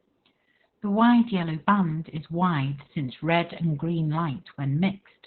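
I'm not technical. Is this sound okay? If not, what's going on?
No, the speech has heavy Opus voice compression throughout: everything above about 4.3 kHz is gone, so it sounds muffled, hoarse and a bit robotic, like an old phone line.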